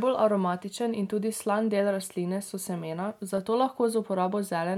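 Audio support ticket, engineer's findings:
Block of digital silence at 3.38 s in the speech. Heard as a single tick, not a gap. Samples drop hard to silence for 1.45 ms and come straight back, no fade. Fits a 64-sample buffer the output stage didn't fill in time.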